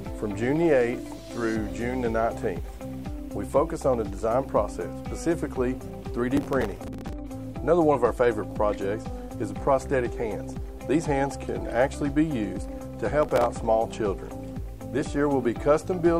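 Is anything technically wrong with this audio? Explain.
Yes, there is processor overload crackle at 6.37 to 7.13 s and 13.23 to 13.46 s. The processor repeatedly missed its few-millisecond buffer deadlines, replaying stale audio with hard edges and producing gritty crackling bursts.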